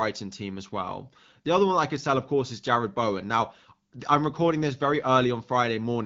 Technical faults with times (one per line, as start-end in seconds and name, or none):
none